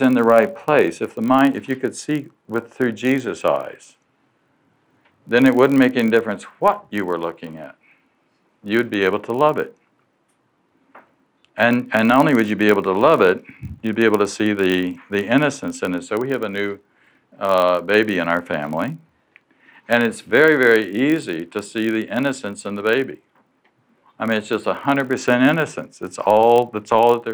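From start to finish a steady buzz at 46.9 Hz runs under the sound: block size mismatch (padded). Each block arrives slightly short and is topped up with silence, which fits a 1024-sample read. Unlike random dropouts, the gaps are perfectly regular, and pitch holds while playback slows to 0.999 times normal speed.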